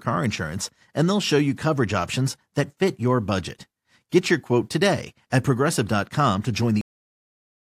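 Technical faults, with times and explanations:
6.81 s, cut-off end: right after "to join" the speech stops mid-sound and falls straight to digital silence with no natural decay, because the final buffers were never written or played out, so the recording simply ends where the data ran out.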